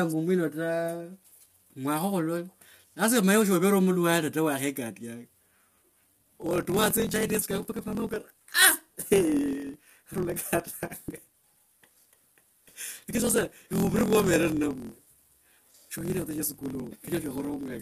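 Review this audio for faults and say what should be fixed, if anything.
Throughout the clip the speech sounds rough and grainy, with a noisy haze between the voice's harmonics. This is likely low-delay AAC compression (AAC-ELD), whose short frames resolve pitch poorly. The damage is plainly audible and fits a bitrate around 32 kbps. Raising the bitrate or using a longer-frame codec where latency allows would prevent it.

From 6.14 s to the end, a steady buzz at 43.1 Hz appears and the speech runs 1.12 times fast while keeping its timbre. This is a block size mismatch (truncated). One stage writes longer blocks than the next reads, so the tail of each block is discarded. The buzz rate fits a 1024-sample read block. Matching the block sizes between the writing and reading stages, or buffering the remainder rather than dropping it, would prevent it.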